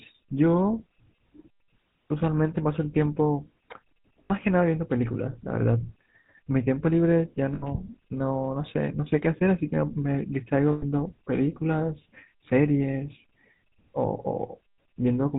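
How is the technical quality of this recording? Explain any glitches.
Quality is limited throughout by GSM coding, with three brief dropouts.

GSM full-rate codec, whole clip: the pulse-excited vocal-tract model, consistent with 13 kbps, caps bandwidth at 4 kHz and leaves the speech plainly buzzy and gravelly.

Lost GSM frames at 4.24–4.31 s, 7.54–7.9 s and 10.72–10.84 s, about 60, 80 and 100 ms lost: the last good frame is repeated, leaving a rough metallic ring.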